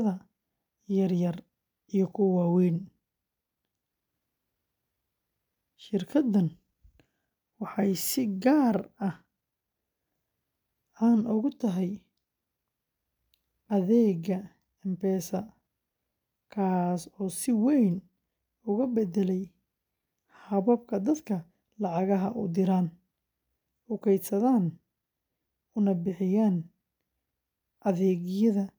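A recording of speech, with no technical fault to be heard anywhere in it. Nothing turns up at any point, so there are no times or causes to report.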